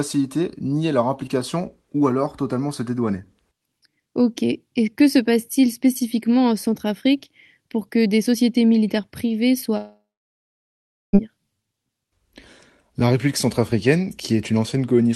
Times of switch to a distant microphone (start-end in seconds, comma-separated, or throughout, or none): none